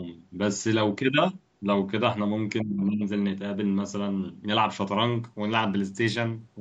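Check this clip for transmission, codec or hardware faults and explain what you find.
Two faults are audible in this speech.

From 2.62 to 3.03 s the speech dips by roughly 20 dB, likely speech suppressed in double talk: the echo canceller, unable to separate talker from echo, attenuated both.

From 5.24 s to the end the treble dulls and grit rises, a Bluetooth SBC bit pool drop. Starved upper sub-bands point to a fall from bit pool 28 to 12, around 96 kbps.

The call microphone processing band-limits everything to 8 kHz.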